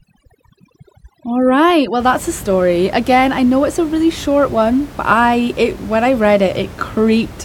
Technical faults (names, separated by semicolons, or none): overdone noise removal